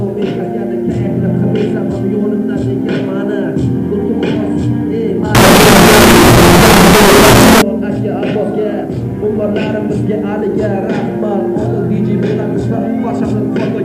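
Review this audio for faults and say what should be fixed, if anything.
From 5.35 s to 7.62 s the sound becomes very loud, harsh distortion, with quiet moments pushed up to the level of everything else. This is the signed and unsigned mixed up fault, likely in how the 8-bit samples are interpreted. Flipping the top bit turns every zero crossing into a jump across the full range, so near-silence reads as near full scale. Declare the 8-bit sample signedness explicitly at both the writer and the reader instead of relying on format defaults.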